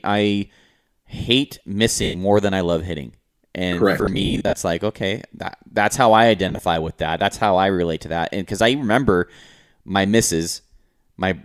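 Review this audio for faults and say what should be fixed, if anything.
The speech briefly turns into a hissy, smeared buzz at 2.03–2.16 s, between "I hate" and "more than I love". It happens again in scattered bursts at 3.99–4.53 s, before "like okay that that's", and once more at 6.49–6.61 s, between "that that's how I" and "with that". These are lost LE Audio frames. About 110 ms is lost in the first event. In the second, 310 ms is lost across a 540 ms stretch, in runs of up to roughly 50 ms. In the third, 70 ms is lost across 120 ms. The gaps come in 10 ms steps, which fits LC3's frame length. For each missing frame, the decoder replays the last spectrum with randomised phase signs, so the pitched sound becomes noise. To fix this, strengthen the Bluetooth link by shortening the distance, reducing 2.4 GHz interference, or adding retransmission margin.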